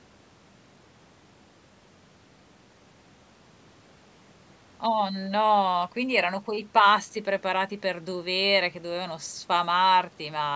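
Nothing stood out on listening to this speech, which shows only the expected trimming of the lowest bass from a call's microphone processing and carries no content above 8 kHz.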